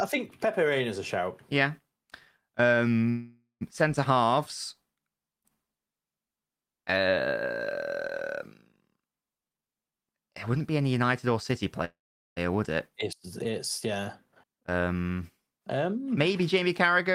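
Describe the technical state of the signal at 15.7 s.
At 15.7 s the speech signal is intact, with no dropout, distortion, glitch or other fault.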